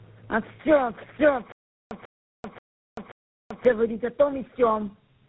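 Tandem speech coding runs through the whole clip. The speech sounds rough, muffled and warbly, and nothing is present above 3.8 kHz. This points to three speech codecs in a row, most likely ending in GSM full rate, each decoding and re-encoding the degraded output of the one before. Their errors pile up, so the result is worse than any single coder would give.

Stutter with silent gaps runs from 1.52 to 3.65 s. A 0.14 s burst of speech plays, then about 0.39 s of digital silence follows, and the pair repeats every 0.53 s, four times in all. The likely cause is a stalled player or stream that replayed its last buffered fragment at each retry and then ran dry. Whatever speech belonged in that span never plays.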